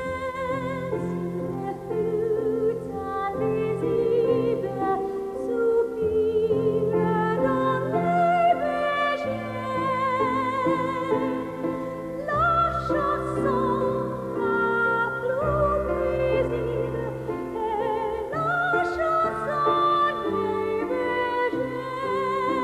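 No technical faults can be heard in this audio. There is nothing here to time or locate, since no moment stands out as a defect.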